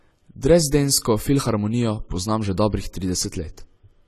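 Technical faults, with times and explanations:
Throughout, AAC compression: the speech sounds dull and smeared, with a fizzy, unsteady texture on sibilants. Nothing is present above 14 kHz, so the highest frequencies are cut away. The likely cause is AAC-LC coding at a low rate, which fits about 32 kbps. At that rate the encoder lowers its cut-off and quantises the remaining frequency lines coarsely against its hearing model, which leaves gaps and noise-filled bands that are plainly audible.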